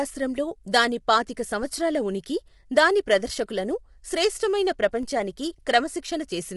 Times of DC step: 5.03

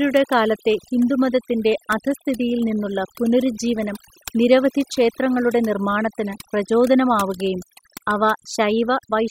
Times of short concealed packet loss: none

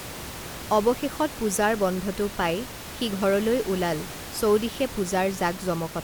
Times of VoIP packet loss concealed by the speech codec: none

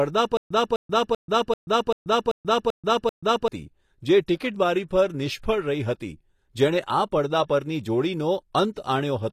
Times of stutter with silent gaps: 0.37-3.48

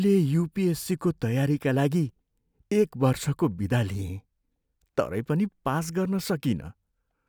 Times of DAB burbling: none

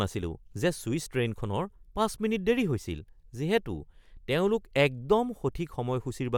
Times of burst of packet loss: none

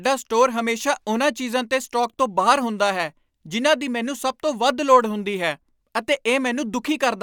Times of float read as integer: none

